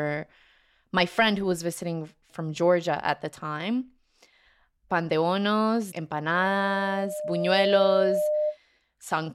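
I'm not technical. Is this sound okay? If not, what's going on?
No. From 6.33 s to 8.58 s there is a loudspeaker feedback squeal. A microphone is picking up the loudspeaker it feeds, so one pitch, around 600 Hz, keeps looping back and growing. It takes about a second and a half to swell before ending up louder than the speech. That gradual, self-building rise sets it apart from electrical hum or a steady test tone, which stay constant from the moment they appear.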